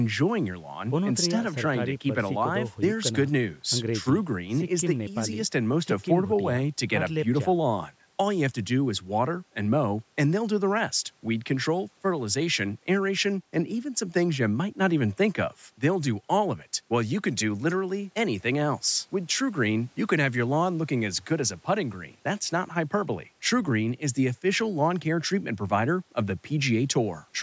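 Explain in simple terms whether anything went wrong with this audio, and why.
Listening closely to the speech, nothing stood out as having gone wrong, and the slightly thinner bass is just the normal effect of the call's microphone processing.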